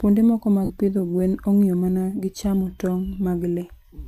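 A short speech clip with a dropout from 0.64 to 0.70 s, just before "pidho gwen ong'iyo mana", caused by lost LE Audio frames. The gap lasts about 52 ms, which fits seven lost 7.5 ms LC3 frames, the likely transport for this audio. The decoder filled the gap by repeating the last spectrum with scrambled phase and fading it out, so the speech turns into a brief noisy smear. On a spectrogram, harmonic lines dissolve into a diffuse, decaying patch. On the waveform, the envelope becomes irregular and then shrinks.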